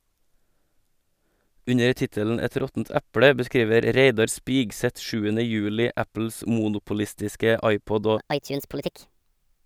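Speech recording with a wrong sample rate from 8.18 s to the end at 9.65 s. The voice runs 1.38 times fast and about 5.5 semitones high. This fits 32 kHz audio played at 44.1 kHz.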